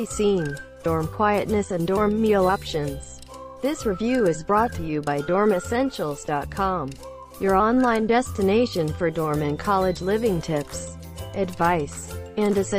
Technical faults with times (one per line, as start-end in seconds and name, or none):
none